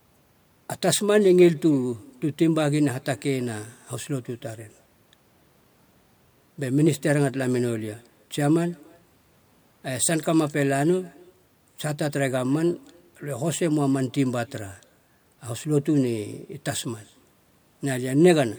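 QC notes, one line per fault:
Throughout, echo with no canceller: the far end is playing the call over a loudspeaker, its microphone picks that playback up, and nothing subtracts it before it is sent back, so the speech returns after the network round trip, around a third of a second late. The returning copy sits about 29 dB below the direct speech, so it is faint, but every phrase trails a thin shadow of itself.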